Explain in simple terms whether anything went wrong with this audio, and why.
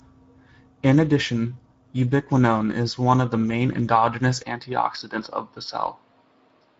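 The whole clip runs through the Speex codec, an old voice-chat compressor that's squeezing the speech hard, so it sounds noticeably hoarse and grainy, with nothing above about 7.8 kHz. From 4.43 s to the end, it likely switched to a poorer input device: the sound abruptly gets duller and a bit quieter, with the top cut near 5.7 kHz, but no gap at the change.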